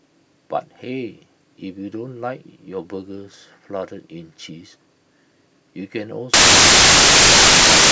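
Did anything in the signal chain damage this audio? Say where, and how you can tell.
Yes. The damage sits in sample-format conversion. From 6.34 s to the end of the clip at 7.91 s, the speech is replaced by loud, harsh broadband noise, close to white on the louder sounds. That is the signature of samples built from the wrong bytes. The reader assembled each sample with a byte offset, a swapped byte order or a wrong alignment, so the rapidly changing low-order bits landed in the most significant positions and now dominate every value.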